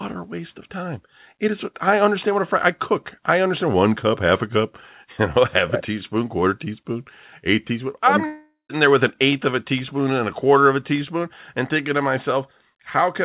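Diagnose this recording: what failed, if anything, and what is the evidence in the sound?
From 8.26 to 8.71 s the speech turns into a fading buzz, then 150 ms of silence before "there with an eighth", which is likely a long network dropout. A spectrogram shows smeared harmonics below G.711's 4 kHz ceiling decaying to blank. The waveform envelope collapses, and 440 ms is lost.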